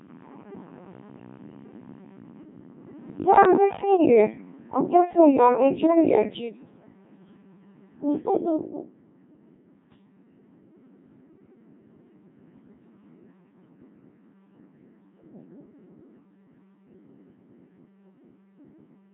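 From start to finish the speech has passed through the Codec 2 vocoder, heavily damaged, at a rate that points to about 1.6 kbit/s. Instead of the waveform, the system kept only pitch, voicing, energy and a coarse spectral envelope, and the decoder rebuilt the speech from sine waves. The result sounds robotic and buzzy throughout, with the natural texture of the voice replaced by a synthetic, smeared timbre.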